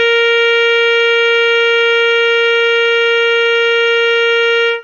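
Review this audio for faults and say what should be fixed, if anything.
The music is band-limited to nothing above 6.8 kHz throughout, with plainly audible smearing. This is likely AAC compression at a low bitrate, around 24 kbps. Encode at a higher bitrate or keep a lossless master.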